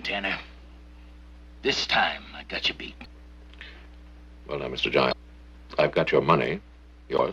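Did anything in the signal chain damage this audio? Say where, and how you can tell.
Yes: damaged data in a compressed stream, at the codec or storage stage. Short glitches at 3.04 s, 5.11 to 5.13 s and 7.18 to 7.20 s come from corrupted bytes that make the decoder misread frames, lose sync and resynchronise at the next valid header.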